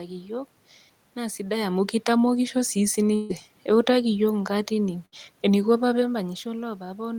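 A speech recording with two held, fading smears where audio drops out: at 3.15 to 3.31 s, lasting about 140 ms, and at 5.05 to 5.14 s just after "yiok inkaatini", about 60 ms. Each is a burst of packet loss. The receiver stretched the last sound and let it decay, then resumed further along, so that stretch of speech is gone. At 6.00 to 6.03 s a brief smudge marks short concealed packet loss: roughly 20 ms never arrived in time and was patched by extending the preceding sound before blending back into the real audio.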